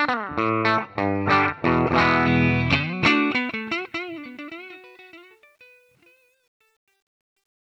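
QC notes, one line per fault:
3.07–7.66 s, truncation distortion on a fade: the fade-out beginning around 3 s loses resolution without dither, which fits a stage keeping about 10 bits. The waveform collapses into coarse steps, and from 4.54 s to the end the tail turns gritty.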